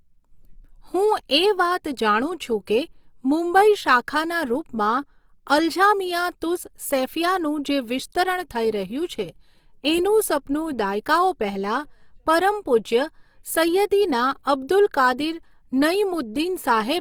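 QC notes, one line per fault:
Throughout, Opus compression is plainly audible. The speech sounds grainy and rough, with a noisy texture over its tones instead of swirling. The likely cause is an Opus encoder in its CELT music mode. It keeps each band's energy but fills bands it cannot afford with folded copies or noise. Content still reaches about 20.4 kHz, so the bandwidth has not narrowed. That texture fits a rate near 24 kbps.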